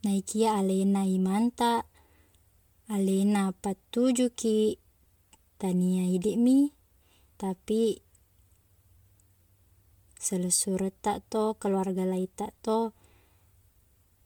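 From start to finish, the speech sounds swirly, smeared and hollow, with blurred attacks and nothing above 20.1 kHz. This is generation loss, likely from about five rounds of MP3 encoding, fitting 128 kbit/s. Each pass requantises on a shifted frame grid, compounding noise and spectral holes.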